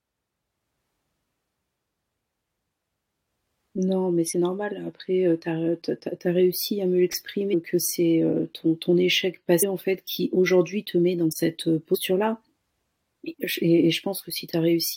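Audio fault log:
4.32 s, 7.53 s, 9.62 s and 11.94–11.96 s: damaged data in a compressed stream. Short blips of about 20 ms or less break into the speech, the first just before "normal après heu tu". Corrupted bytes made the decoder misread frames and lose sync until it found the next valid frame header.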